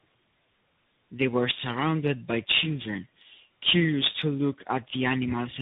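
From start to finish, the speech shows tandem speech coding. It has passed through more than one speech codec in a row, each decoding and re-encoding the last one's output. The damage stacks. Nothing reaches above 3.8 kHz, so the sound is dull and muffled. A low-rate coder's rough, warbly texture sits under a grainy slope-tracking hiss. This fits a G.729A leg feeding a CVSD link, with G.711 between them.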